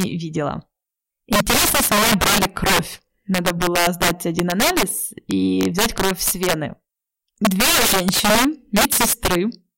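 Integer overflow runs through the whole speech clip. The signal is driven about 15 dB too hot, and a small share of samples, roughly 7 percent, exceed the maximum and wrap to the opposite extreme instead of being held there. Clipping flattens peaks, but these peaks flip, so loud syllables burst into violent, harsh cracks.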